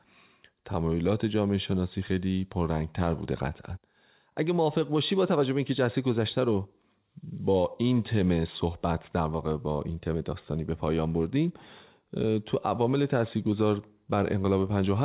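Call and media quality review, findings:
No faults found.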